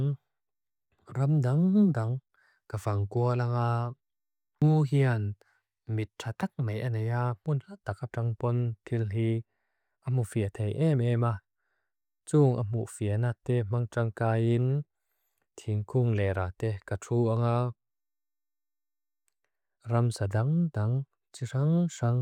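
Nothing in this speech recording stands out as a technical fault, so there's no problem to point to at any moment along the way.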